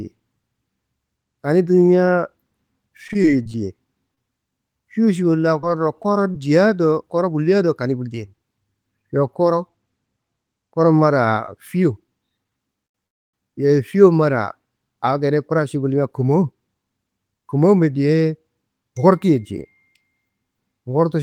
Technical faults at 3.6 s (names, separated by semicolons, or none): scattered short gaps